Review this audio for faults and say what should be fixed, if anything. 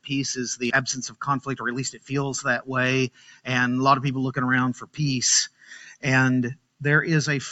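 The level pumps and thins across the whole clip, with held material sagging by around 10 dB while attacks stay intact. This is a noise suppressor applied to music or sounds: a speech-tuned suppressor treats steady tones and decays as noise and pulls them down.

Five stretches dip sharply, by about 15 to 18 dB, at 1.92–2.12 s, 3.10–3.47 s, 4.74–4.99 s, 5.49–6.04 s and 6.55–6.81 s. Each is sound cut by the noise suppressor, which misjudged these sounds as noise and attenuated them hardest. The call microphone path, with nothing above 8 kHz, is not at fault.

To prevent this, disable noise suppression, or switch the call to its music or original-sound mode, whenever non-speech audio is sent.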